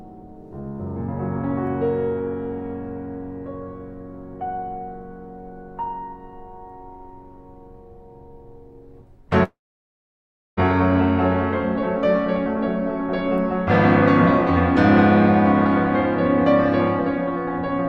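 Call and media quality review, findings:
Long network dropout, 9.43–10.60 s in the music: concealment buzz fades into about 1 s of silence. Unlike a brief packet-loss glitch, the lost passage is skipped. Likely a network outage.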